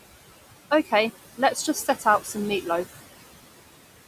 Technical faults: noise suppressor artifacts; speech cut by the noise suppressor

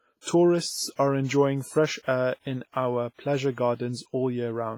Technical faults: WMA compression

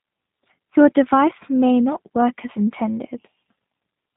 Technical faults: G.729 codec

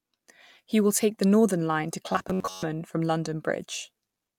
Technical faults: robotic sound from repeated short buffers

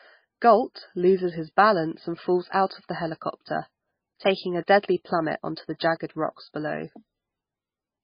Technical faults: MP3 compression

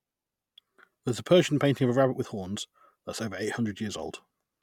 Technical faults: none

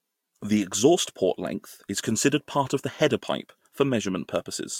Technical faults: none

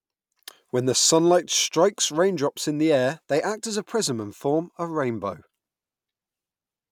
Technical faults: none

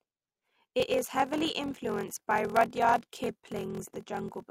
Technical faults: block size mismatch (padded)

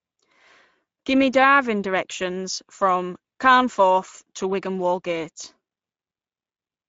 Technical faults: Speex codec

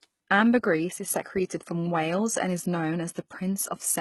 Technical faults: HE-AAC compression; clock slip clicks

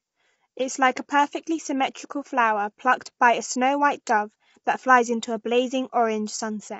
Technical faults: low-delay AAC compression

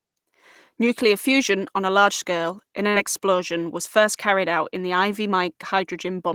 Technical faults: short concealed packet loss

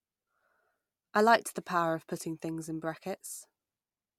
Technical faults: none

